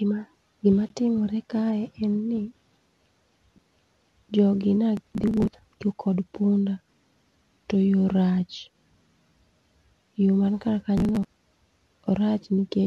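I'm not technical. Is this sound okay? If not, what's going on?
No, there are three kinds of fault in this speech recording.

At 0.89 s there is a tiny hole, about 14 milliseconds of silence, at a gap at a join of encoded pieces. The recording was saved in separate parts and stuck together without trimming the bit of silence the saving process adds at the edges. Unlike a skip, nothing is lost: after the hole the speech carries on exactly where it stopped.

At 3.58 s, just before "jogi ne", there is a CD skip. The player's laser jumped to a different turn of the disc's spiral, went quiet for a split second and then resumed from another spot. You hear a tick and a sudden jump in the speech rather than a pause, which is what sets it apart from the join gap.

From 4.97 to 5.79 s, between "jogi ne" and "to kod punda", and again from 10.98 to 11.36 s after "man kar", there is processor overload crackle. 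The computer was too busy to keep up and dropped dozens of very short slices of sound in a row, which fits slices of about 10 milliseconds each. It sounds like a gritty tearing over the speech, many small breaks bunched together, not a single gap or jump.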